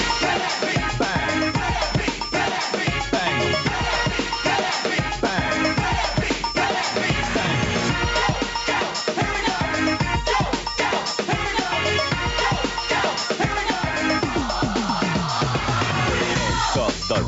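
Gain pumping runs throughout the clip, from start to finish. The gain swings by roughly 10 dB, so loud and quiet passages sit squashed close together in level. The likely cause is input gain set far too high for the microphone, with a fast limiter or compressor clamping down on every peak. The call microphone processing leaves nothing above 8 kHz.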